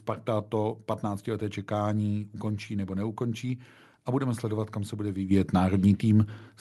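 At 5.31 s, the call software found the microphone too quiet and stepped up its input volume by about 9 dB. Speech and background jump louder together in a single step.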